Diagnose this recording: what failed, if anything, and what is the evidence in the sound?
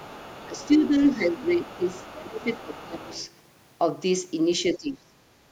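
The problem's in call processing. You can hear the other side's voice leaking through underneath the talker from 0.0 to 0.89 s, 1.07 to 2.12 s, 2.36 to 2.86 s and 3.08 to 3.26 s. It sits around 25 dB below the main speech, and the last scrap is fainter still, nearer 35 dB down. The likely cause is a loudspeaker at the talker's end feeding into the mic and an echo canceller that isn't fully removing that path.

The same stage shows speech suppressed in double talk. The talker's level dips at 0.46 to 0.95 s, 1.16 to 2.46 s, 2.64 to 3.15 s and 4.75 to 5.16 s. The first dip is shallow, about 10 dB, and the later ones go to about 20 dB down. The second costs about 0.7 s of speech and the others about 0.4 s each. The first three dips overlap the leaked far-end audio, which points to the canceller likely hearing both sides at once and ducking everything rather than just the echo.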